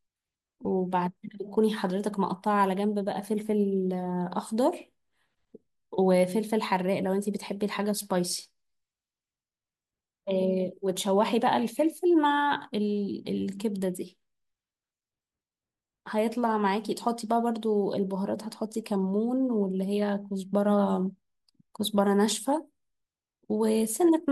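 Speech, with nothing technically wrong and no faults to time or trace to a cause.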